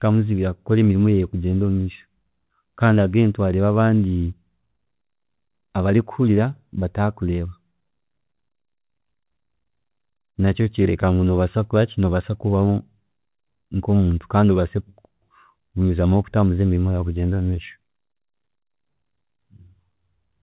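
Between 10.46 and 11.06 s the speech picks up a handful of tiny ticks and smeared hiccups, about four in all, each around 10 ms at most, all heard through a narrowband call sound with nothing above 4 kHz. These are scattered short gaps: a few packets arrived late or never came, and the receiver covered each hole by stretching the preceding sound, roughly 40 ms of patching overall, which also lengthens the stretch by 20 ms.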